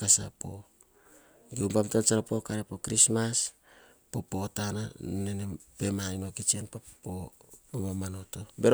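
At 2.20 s the speech jumps about 6.3% faster and about 105 cents (just over a semitone) sharp, holds there until 3.79 s, then snaps back to normal. The same shift recurs from 6.42 to 6.96 s. Speed and pitch move together, which points to a drift correction step, likely a clock-matching stage abruptly raising the playback rate to drain its buffer before returning to nominal rate.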